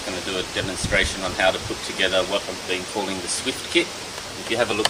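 Nothing technical stands out in this audio; no dropouts, glitches or distortion can be heard anywhere in it.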